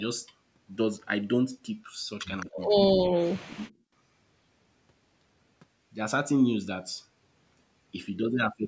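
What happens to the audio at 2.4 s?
An echo leak appears from 2.40 to 2.46 s: a brief, faint copy of the speech, trailing by about 214 ms and roughly 20 dB below it, likely because a far-end echo canceller let some loudspeaker sound leak back into the call.

Speech suppressed in double talk follows from 2.46 to 3.85 s. The talker dips in pieces, sinking by as much as about 40 dB and totalling about a second of lost level, likely from the canceller mistaking overlapping talk for echo and muting both.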